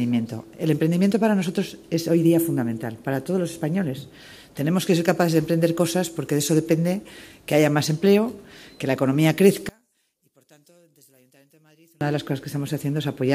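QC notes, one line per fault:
9.69–12.01 s, one channel inverted: when the stereo channels are folded to mono here, the sound nearly disappears, dropping by about 35 dB to a faint trace. What remains is only the difference between left and right. The likely cause is reversed polarity on one channel, so that everything common to both sides cancels on summing, taking the centred material with it before the sound returns at 12.01 s.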